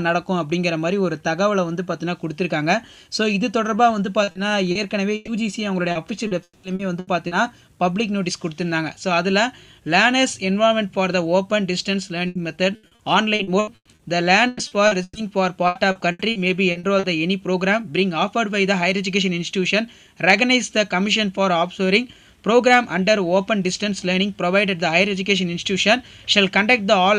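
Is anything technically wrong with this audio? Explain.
Yes. Repeated packet loss (robotic sound) occurs at 4.23–5.30 s, 5.91–7.34 s and 12.27–17.06 s. Lost or late packets leave holes, each patched by extending the preceding sound. Gaps up to 120–200 ms cover roughly a quarter to a third of each stretch, making the audio choppy with pieces missing.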